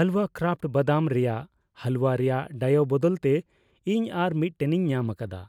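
No technical faults are audible.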